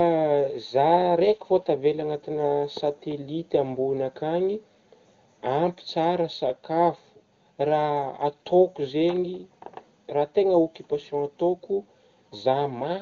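No technical faults can be heard anywhere in the speech.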